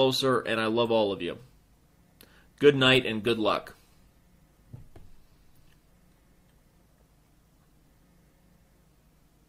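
From 2.8 s the sound turns rougher and watery, with the top end dulled, and it stays that way until about 7.57 s, at its worst for roughly 3.2 s. This is a call bitrate drop. The connection's bandwidth estimate fell, so the encoder was allowed far fewer bits and had to code the audio more coarsely, trimming high frequencies. The degradation fits a fall from about 64 to 24 kbps before the rate recovered.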